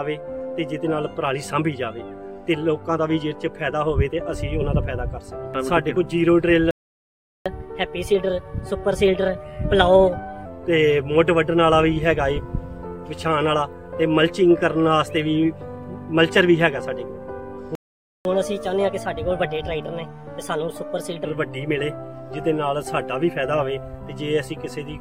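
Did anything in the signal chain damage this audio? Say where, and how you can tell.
Yes. Playback stalls at 6.71–7.46 s and 17.75–18.25 s silence the sound. This likely points to a starved or blocked player buffer.

Catch-up at higher speed follows each stall, at 7.46–10.46 s and 18.25–21.25 s. Playback runs 1.15 times fast and about two semitones sharp, then returns to normal. Because speed and pitch rise together, this is the player resampling its backlog, not a pitch-shift fault.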